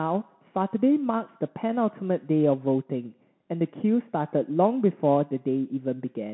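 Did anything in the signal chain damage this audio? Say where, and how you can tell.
Yes, at the codec stage: a Bluetooth CVSD headset codec runs through the whole speech clip. Energy sits between about 150 Hz and 3.5 kHz with nothing above 3.9 kHz, and the granular hiss and scratchy s sounds from a one-bit delta step that can't keep up, consistent with a 64 kbps stream, separate it from clean telephone band-limiting.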